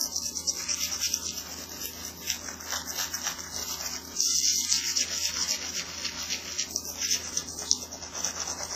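Throughout, the sound is heavily smeared and washy, with ringing around transients, a hiss that swells and fades with the signal, and nothing above 14.6 kHz. This is likely WMA compression: long transform blocks spread quantisation noise, and weak components are zeroed, which fits a bitrate around 24 kbps.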